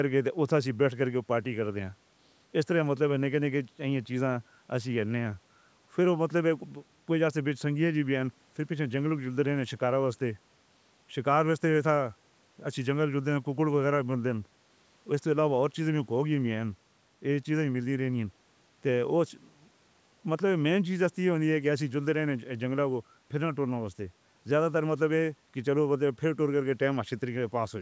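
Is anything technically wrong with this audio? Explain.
No, nothing's wrong here: the speech has simply been through a call's microphone processing, so the lowest bass is trimmed and nothing reaches above 8 kHz, which is just how that path normally sounds.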